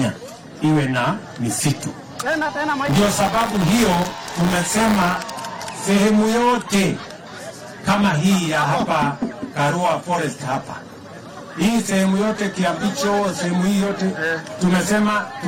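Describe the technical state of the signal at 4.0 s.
At 4.0 s the signal is affected by buffer tearing, running from 2.85 s to 5.17 s. Writer and reader positions in the ring buffer have slipped, so each period carries a small slice of audio about 30 ms stale, hard-spliced in, producing a steady 100 Hz robotic buzz under the sound.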